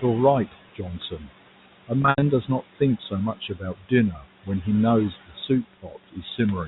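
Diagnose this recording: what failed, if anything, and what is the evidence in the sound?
The call-processing noise suppressor is the first failure. It treats the room noise, which sits about 15 dB below the speech, as steady noise and pulls it down by about 17 dB frame by frame across every band. That gain moves constantly, so the background drops away in pauses and swells back under speech throughout. All of this sits within the 4 kHz telephone band of the G.711 A-law link.

The same suppressor also cuts speech. It misjudges parts of the speech as noise and attenuates them along with the background. This happens between 0.52 and 1.32 s (deepest drop about 14 dB, roughly a third of a second affected), between 2.48 and 4.65 s (about 16 dB, roughly half a second), and from 5.1 s to the end (about 18 dB, roughly 0.4 s). Soft consonants and word tails sound swallowed or faint.

Packet loss with pitch repetition is a network fault. 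Between 2.02 and 2.22 s, 140 ms of audio goes missing, scattered over 200 ms, which points to about seven 20 ms packets. The receiver conceals each gap by repeating the last pitch period, so the shorter losses sound like a buzzy, held tone. The longest run is 80 ms, which outlasts the roughly 50 ms fade, so that gap sinks into brief silence before the speech cross-fades back in.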